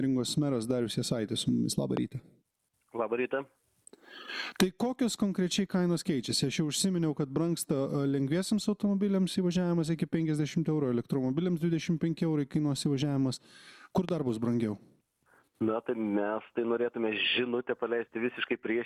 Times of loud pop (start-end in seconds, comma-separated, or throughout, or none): 1.97-1.99, 14.09-14.11